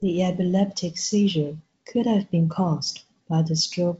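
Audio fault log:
Nothing to log here; it's just speech coming through G.722 wideband telephone coding at 56 kbit/s, with the light texture that coding leaves and nothing above 7.8 kHz.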